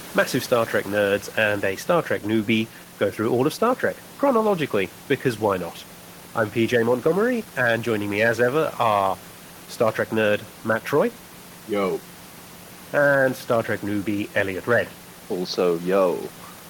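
Nothing in this speech recording stood out as a technical fault on listening, with only the room's own background noise sitting about 23 dB below the speech.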